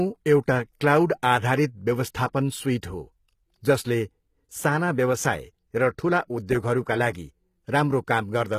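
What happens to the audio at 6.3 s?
At 6.3 s you're hearing the same HE-AAC-style damage that runs through the whole clip, likely from that codec at a rate around 20 kbps. The treble is rebuilt by copying lower bands upward, so s sounds come out gritty and lispy, with nothing above 14.9 kHz.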